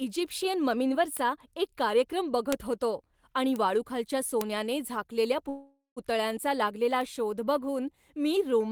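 Sharp, isolated ticks at 1.17, 2.52, 3.56 and 4.41 s are bit error spikes: single flipped bits briefly throw a sample value far off before it snaps back. From 5.49 to 5.98 s the sound stretches into a fading buzz, then about 150 ms of near-silence, before resuming where it stopped. This is a call audio freeze, likely caused by delayed packets draining the jitter buffer, which inserts roughly half a second without losing any audio. A further bit error spike ticks at 7.01 s.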